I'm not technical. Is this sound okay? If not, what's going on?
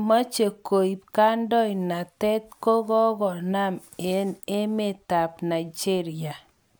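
Yes, nothing is wrong with this recording.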